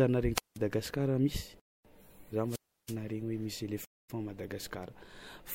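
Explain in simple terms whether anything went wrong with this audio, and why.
A couple of things went wrong. First, there are two wireless microphone squelch dropouts: right after "ary naharegny" at 0.34 to 0.58 s, and again at 2.47 to 2.96 s. The radio link weakened, so the receiver muted itself for about 180 ms and then about 330 ms, with a rise of hiss just before each hole.

Second, there's a gap between chunks at 1.60 to 1.85 s and again at 3.85 to 4.10 s. The audio was handled in two-second pieces, and each join got a clean 250 ms of silence stuck in, so the speech stops abruptly and then picks up.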